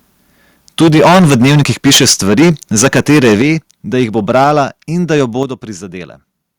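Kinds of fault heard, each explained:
Microphone overload: at 0.8–2.51 s, 2.78–3.51 s (just before "da jih bo"), 4.0–4.03 s, 4.3–4.61 s and 5.1–5.21 s, the loudest parts of the speech break into a harsh, crackly edge. The cause is likely an input level set too high, so peaks hit the converter's ceiling and their tops are sheared flat. The first burst is worst, about 14 dB over with roughly a fifth of samples flattened. Later ones run about 10, 2, 5 and 2 dB over.
Microphone volume stepped down: at 0.82 s, 3.42 s, 4.44 s (just after "da jih bo") and 5.43 s, the whole sound, voice and background together, drops abruptly in level. It is likely the call software reacting to the distorted peaks by cutting the device's input volume in a single step. Each cut lands during or shortly after an overload burst, by about 2, 8, 3 and 6 dB.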